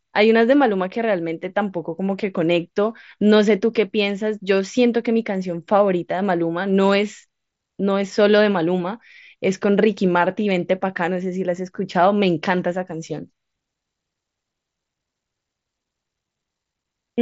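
No faults in this speech clip; the Bluetooth mSBC headset link caps the band at 8 kHz and leaves a light grain on the louder syllables.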